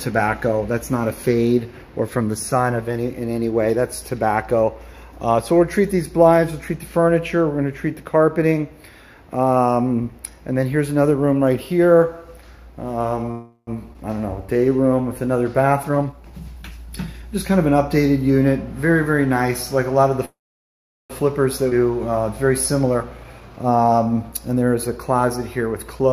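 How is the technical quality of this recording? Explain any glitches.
The quality isn't great: there's a cluster of network-style timing glitches between 13 and 25 seconds, where the audio stalls, jumps, drags and rushes.

Call audio freeze, at 13.31 to 13.69 s and 20.25 to 21.12 s: the sound hangs on its last bit and fades out. The first lasts about 0.36 s with only a brief silence. The second runs about 0.85 s and is nearly all silence. Likely the packets were held up and the jitter buffer ran dry, so nothing is lost, just delayed.

Skip ahead, at 13.93 to 13.96 s and 21.70 to 21.73 s: playback lurches forward with almost no gap. About a tenth of a second is gone the first time and around 0.3 s the second, as dropped audio gets spliced straight across.

Jitter buffer slow-down, at 14.21 to 15.19 s: the audio drags to 90% speed at unchanged pitch. The receiver repeats tiny pitch periods to rebuild its reserve, adding 103 ms and giving a stretched feel.

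Jitter buffer speed-up, at 15.74 to 17.23 s and 22.87 to 24.62 s: the audio rushes at the same pitch, first at 123% and then at 112%. The buffer is trimming its backlog by snipping tiny pitch-period pieces, which cuts roughly 0.4 s and 0.2 s.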